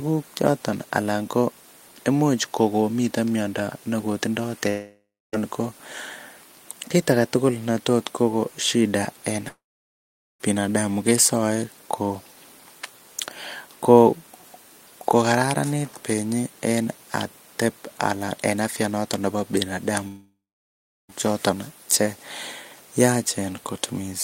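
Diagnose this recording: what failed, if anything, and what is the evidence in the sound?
The speech cuts out at 4.69 to 5.35 s, 9.49 to 10.42 s and 20.08 to 21.11 s. Each gap begins with a brief fading buzz or hiss, then silence. Speech resumes with that stretch missing. This is likely a long network dropout: packets stopped arriving, and the receiver's concealment faded out.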